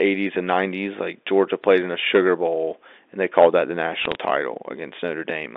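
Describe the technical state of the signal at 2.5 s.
At 2.5 s the speech is intact, with no fault, only the narrow telephone band of ordinary G.711 telephone coding, roughly 300 Hz to 3.6 kHz.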